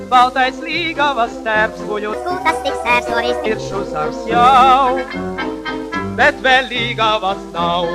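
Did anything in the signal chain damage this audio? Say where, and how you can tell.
Yes: from 2.13 to 3.46 s a section at the wrong speed runs 1.4x fast, about five semitones high, with harmonics stepping upward on the spectrogram. The likely cause is a playback clock mismatch.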